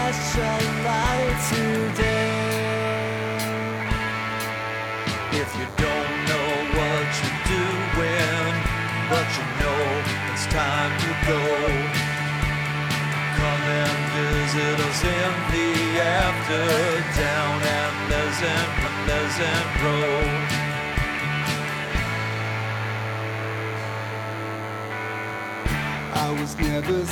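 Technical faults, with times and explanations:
Throughout: DECT cordless phone buzz, a thin steady 100 Hz buzz with many harmonics, about 15 dB below the audio, from rectified 10 ms radio bursts.
18.81–19.79 s: stream segment repeated. The player queued the same stretch twice, so about 0.98 s of audio plays again after a small blip.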